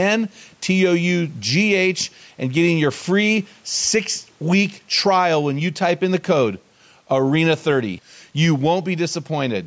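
Gain pumping runs through the whole clip. The gain swings by about 5 dB, pulled down under each loud syllable, likely from excess gain driving a fast limiter. Unlike a noise gate, it never cuts the background out.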